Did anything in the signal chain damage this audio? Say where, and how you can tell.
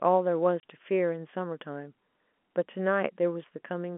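Yes. There is packet loss filled with silence at the network stage, from 0.60 to 0.63 s in this speech. The audio drops abruptly to digital silence for 30 ms, with a hard cut on each side. A gap that short and clean points to one lost packet of about 30 ms that the receiver replaced with silence. The telephone line's 200 Hz to 3.4 kHz band from G.711 coding remains audible around the gap.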